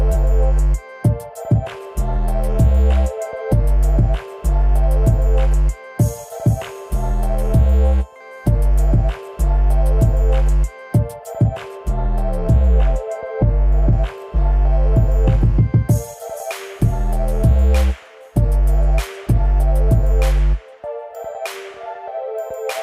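From 11.77 s to 13.93 s the audio shows de-emphasis applied wrongly. A treble-cut curve intended to reverse pre-emphasis has been applied where no pre-emphasis existed, or has been applied a second time, so the high end is pulled down with nothing to compensate for it. The response falls away smoothly above the midrange, sitting about 8 dB lower at 10 kHz than at 1 kHz. Through that stretch the sound turns dull and muffled.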